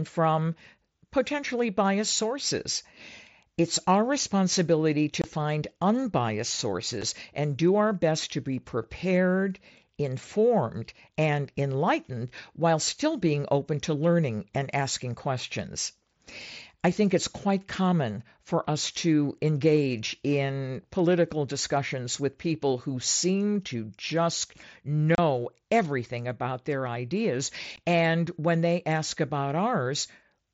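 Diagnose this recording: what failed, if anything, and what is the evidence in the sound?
The Bluetooth link between headset and phone dropped voice packets, and nothing concealed the gaps. The speech has hard-edged holes at 5.22 to 5.24 s (about 22 ms), 7.02 s (about 7.5 ms), 25.15 to 25.18 s (30 ms) and 27.76 s (about 15 ms). The lengths come in 7.5 ms steps, which fits whole mSBC packets going missing over the air while the wideband codec itself still carries speech up to 8 kHz.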